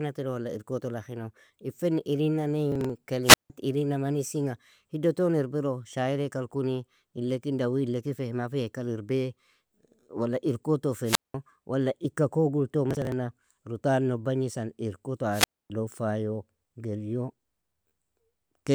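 From 2.72 to 2.90 s there is a burst of processor overload crackle. The processor fell behind and missed a run of short audio deadlines. Each miss was skipped, so the audio jumps forward with a hard edge, and the rapid chain of small gaps is heard as gritty tearing over the voice. The spacing fits a buffer of about 10 ms, with a handful missed here.

From 3.23 to 3.50 s comes the first wireless microphone squelch dropout. The FM radio link faded far enough that the receiver's squelch closed, giving a short swell of hiss, a hole of near silence lasting about 160 ms, and then the voice coming back. A second squelch dropout runs from 11.04 to 11.34 s, with a mute of about 190 ms.

From 12.91 to 13.12 s the processor overload crackle returns, longer and denser. It points to something like twenty consecutive 10 ms buffers lost to skips, so the tearing is more continuous before it clears.

The last and longest squelch dropout runs from 15.31 to 15.70 s. 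The hiss rises, the output is muted for about 260 ms, and the voice then resumes.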